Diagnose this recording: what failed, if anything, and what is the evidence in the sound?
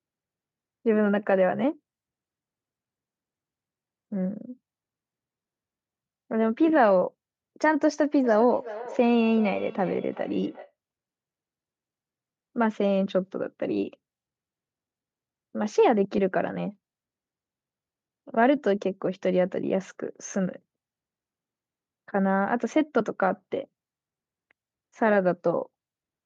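Call processing failed between 8.24 and 10.74 s with a feedback echo between two devices. A second device in the room replays the far end, and this microphone picks it up again. The local echo canceller only removes its own playback, so the sound returns roughly every 0.4 s, peaking at about -15 dB below the speech and growing thinner and more ringing with each pass. A spectrogram shows faint copies of each syllable stacked at that regular spacing.

At 16.17 s the Bluetooth link dropped LE Audio frames. The gap lasts 7.5 ms, which fits a single LC3 frame. The decoder filled it by reusing the previous spectrum with randomised signs, so the sound turns into a brief noisy smear instead of going silent. On a spectrogram, harmonic lines break into a short vertical band of diffuse energy. The waveform stays continuous, with a tiny patch of noise-like texture and no dropout to zero.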